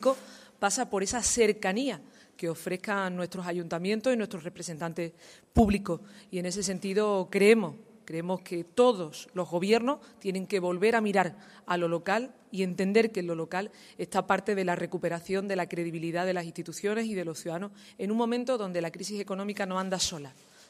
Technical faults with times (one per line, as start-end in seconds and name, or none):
none